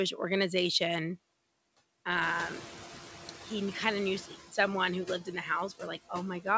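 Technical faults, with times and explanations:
throughout: noise suppressor artifacts. Leftover background dips between phrases and rises under speech, as bands judged steady noise are cut by about 16 dB.
2.21–4.33 s: noise suppressor catching up. After the room noise jumps around 2 s, it leaks through with only about 9 dB reduction, then sinks as the suppressor's noise estimate adapts over 2.12 s.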